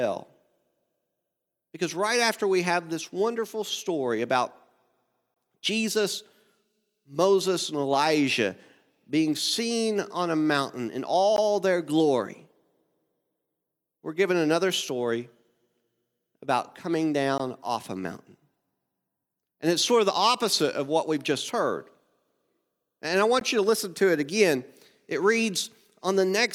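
Short silences at 5.34 s (about 22 ms), 11.36, 17.38 and 23.40 s (16 ms each) are gaps at joins of encoded pieces. Separately encoded segments kept their start delay and end padding. Their strict 6 s spacing and speech resuming exactly where it stopped distinguish them from random dropouts.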